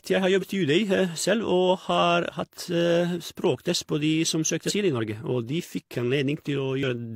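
A speech recording with damaged data in a compressed stream: short glitches at 0.38–0.44 s, just after "jeg har", at 4.65–4.71 s, and at 6.83 s, where the decoder misreads corrupted frames and resyncs.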